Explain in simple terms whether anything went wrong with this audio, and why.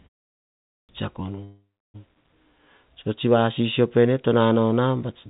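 A clipped start after a pause happens at 0.51 to 0.89 s. After half a second of silence, the playback device had dozed off and needed time to wake up, so roughly the first 0.38 s of speech never came out and the voice starts abruptly.

A call audio freeze runs from 1.44 to 1.96 s. The likely cause is that the call's data got held up in transit, leaving the receiver nothing to play. It stretched the last sound into a fading buzz or hiss, then went quiet for about 0.32 s. Speech then resumes where it stopped, so half a second of delay was added but nothing was lost.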